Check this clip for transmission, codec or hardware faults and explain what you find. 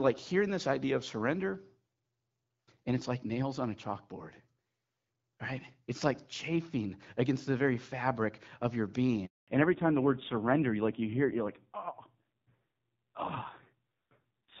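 Two transmission faults appear in this speech clip, both at the same moment, as the call changes networks partway through.

Handover gap, 9.26 to 9.48 s: while the call was passed from one network to another, no speech frames arrived for 220 ms. The voice cuts away almost at once and leaves a clean silence until the new link begins carrying audio, so that stretch of speech is simply missing.

Fallback to narrowband, 9.48 s to the end: after the handover the call no longer runs on the HD Voice wideband codec, which before this point sounds clear, with only light coding damage. It now runs on a narrowband codec. Nothing above 4 kHz survives, so the voice turns dull and muffled, and its rough, buzzy grain suggests one of the lower narrowband rates.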